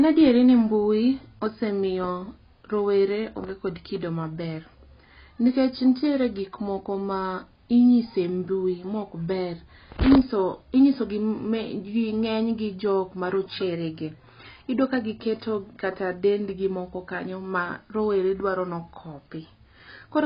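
Speech with heavy AAC compression damage throughout: nothing survives above 5 kHz, so the sound is dull, with smeared sibilants and a warbling, fizzy texture on sustained sounds. The likely cause is AAC-LC coding with too few bits, consistent with roughly 16 kbps.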